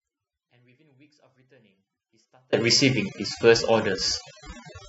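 Overdone noise removal affects the whole clip. The reducer pulls individual frequency bands down whenever they sit near its noise estimate. The background drops and breaks up into twinkling specks. Quiet parts of the speech vanish too.

An audio dropout to a faint residue is already under way when the clip begins and lasts until 2.53 s. Only a faint trace of the signal remains, roughly 40 dB below normal. The speech then returns abruptly. The likely cause is a lost signal feeding a path that stayed live.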